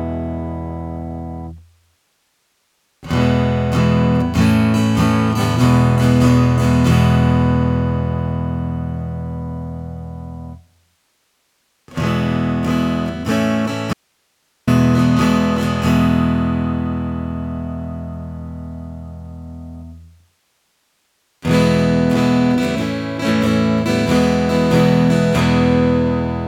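From 13.93 s to 14.67 s an audio dropout to a faint residue leaves only hiss, about 50 dB below the signal, likely because the source was lost while the path stayed live. The waveform shows an abrupt, near-flat gap; the spectrogram shows a faint, even noise band.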